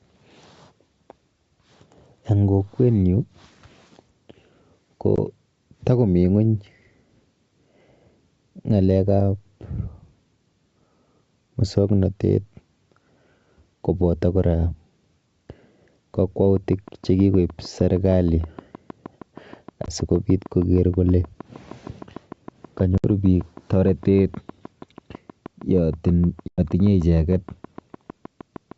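At 5.16 s a short hole cuts the speech. This is packet loss on an ADPCM call. About 20 ms of audio is replaced by silence. The decoder's predictor and step size then lose track of the sender's. The speech comes back with brief, slight distortion.

From 16.57 s to 28.72 s a train of clicks runs over the sound. The ticks repeat at a steady 6.4 per second, around seventy in all. They are roughly as loud as the speech and tick through the pauses too. Interference from nearby equipment or a faulty connection is the likely cause.

Within that stretch the same ADPCM packet loss returns three more times. At 19.86 s about 20 ms drops out. At 22.98 s the gap lasts 60 ms. At 26.48 s it lasts 100 ms. Each gap has hard edges. Each time the speech resumes with some distortion. It settles within some tens of milliseconds. The G.722 wideband coding stays clear up to about 7 kHz, which fits its full 64 kbit/s mode.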